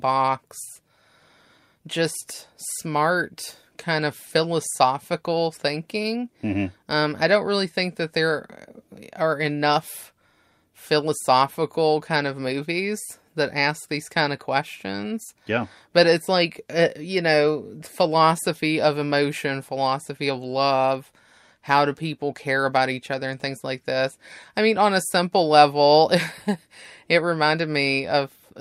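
No technical faults can be heard anywhere in the recording. The speech continues without any break, dropout or disturbance in the signal.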